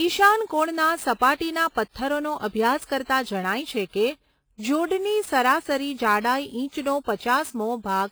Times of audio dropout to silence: none

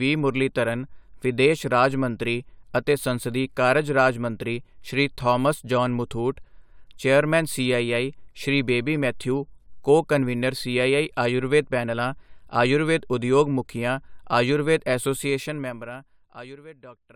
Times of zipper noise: 15.14-16.65

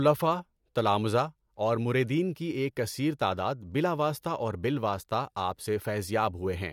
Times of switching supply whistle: none

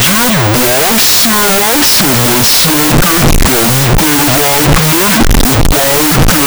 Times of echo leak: none

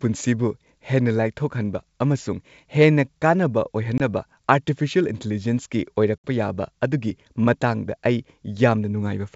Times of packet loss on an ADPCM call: 3.98-4.01, 6.20

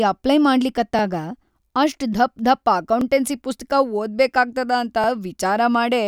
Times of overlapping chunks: 0.99-1.01, 3.01-3.04, 5.04-5.06

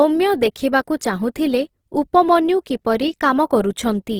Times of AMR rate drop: none

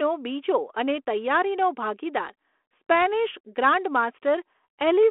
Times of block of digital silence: none

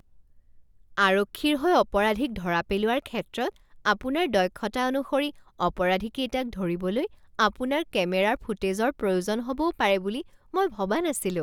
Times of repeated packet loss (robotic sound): none

